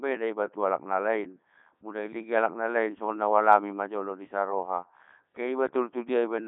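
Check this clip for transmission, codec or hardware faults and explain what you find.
One fault runs through the whole clip: Codec 2 vocoder damage. From start to finish the speech sounds robotic and buzzy, held within about 150 Hz to 3.6 kHz with nothing above 3.8 kHz. The decoder rebuilds the voice from sine waves using only pitch, voicing, energy and spectral envelope, discarding the original waveform. The heavy damage fits Codec 2's 3.2 kbit/s mode.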